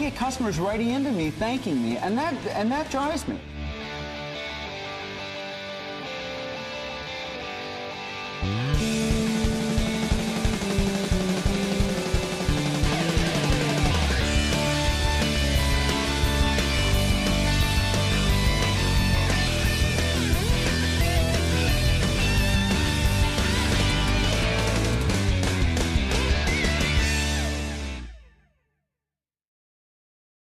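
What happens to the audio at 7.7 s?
Nothing goes wrong at 7.7 s: the audio plays through that moment intact, with no dropout, click, distortion or other fault to be heard.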